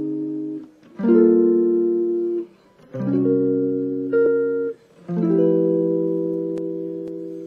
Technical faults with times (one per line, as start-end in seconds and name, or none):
4.25 damaged data in a compressed stream